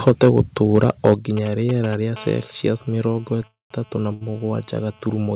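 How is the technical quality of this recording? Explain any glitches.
The speech in this recording is audibly damaged by several faults. It comes through a narrowband telephone-style path with nothing above 4 kHz, which fits G.711 mu-law at 64 kbps.

From 0.07 to 1.13 s the loudest syllables sound harsh and crackly, with their peaks flattened. This is most likely microphone overload: the input drove the converter about 8 dB past its ceiling, so a small fraction of the samples were clipped at the converter's limit.

At 0.09 s and again at 1.14 s the speech and background suddenly drop in level, by about 4 dB and then about 6 dB. These look like the microphone volume being stepped down, likely by the call software reacting to the clipping peaks.

From 1.37 to 2.18 s a galloping, ticking pattern with short raspy buzzes sits around 10 dB below the speech. These are GSM signalling bursts: a nearby 2G phone sending brief radio bursts at a 217 Hz rate, which the audio circuitry rectifies into sound.

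From 2.18 s to the end the ticking becomes a continuous, hard 217 Hz buzz rich in harmonics, about 25 dB below the speech. This is GSM phone buzz from the same phone, now transmitting steadily in a call.

From 3.47 to 3.72 s the audio hangs. The last sound smears briefly and then falls silent for about 160 ms before resuming where it stopped. The result is a 236 ms gap with nothing lost, most likely a call audio freeze from held-up packets emptying the jitter buffer.

From 4.13 to 4.23 s one sound is held unnaturally long, with a slight buzz or dip. This is a short stall from a late packet: the receiver stretched the last audio for 76 ms until the packet arrived, then continued without losing anything.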